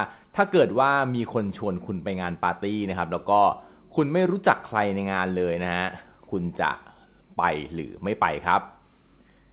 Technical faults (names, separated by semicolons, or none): none